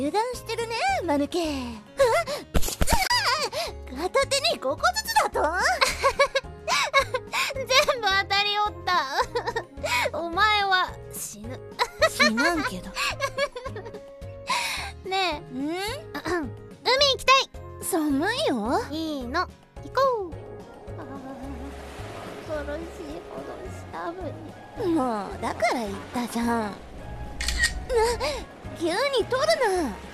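At 3.07 s there is a digital broadcast dropout. The receiver lost a frame, muted, and brought the audio back when valid data returned by 3.11 s. About 24 ms is gone, which points to a single lost frame, with an 8 ms fade into the mute. It is heard as a brief hole in the sound. The waveform shows a short ramp down to a flat line, and the spectrogram shows a thin vertical gap empty at every frequency.

At 4.80 s and again at 24.79 s, a few milliseconds of sound vanish, roughly 7 ms each time. The two sides are butted together with no silence between them, so each is heard as a tiny skip, possibly with a tick. This is likely audio missing between chunks, where a processor drops samples while switching between 10 s blocks. The waveform shows an abrupt discontinuity rather than a gap, and the spectrogram shows a thin vertical broadband line at the splice.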